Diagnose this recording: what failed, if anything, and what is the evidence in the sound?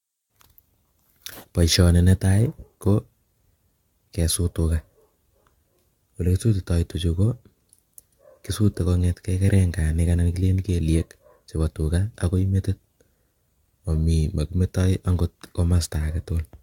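The codec stage is the culprit: the speech has that swirly, hollow smear throughout, attacks go soft, and nothing survives above 17 kHz. That's more damage than one 96 kbit/s AAC-LC pass explains. It's likely generation loss from about seven re-encodes, each requantising on a shifted frame grid.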